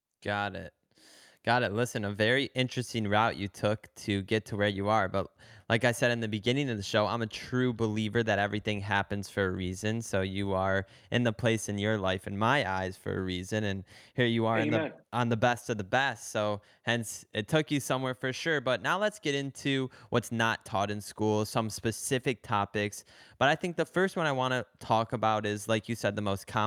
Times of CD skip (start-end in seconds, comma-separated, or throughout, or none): none